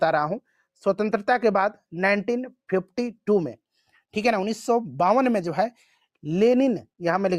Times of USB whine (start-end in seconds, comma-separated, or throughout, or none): none